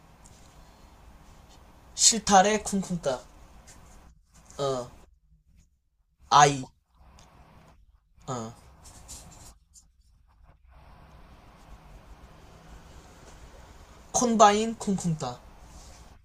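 No technical faults can be heard anywhere in the recording.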